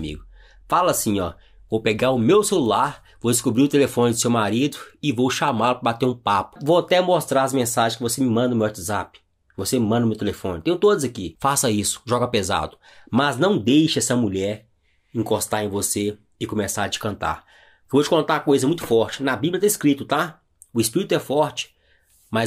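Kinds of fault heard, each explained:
No dropouts, distortion, level jumps, added noise or other disturbances can be heard anywhere in the audio.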